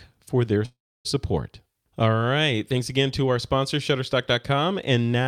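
Right after "for their", from 0.65 to 1.07 s, there's a call audio freeze: the sound trails into a fading buzz and then silence, likely from a starved jitter buffer, before resuming intact.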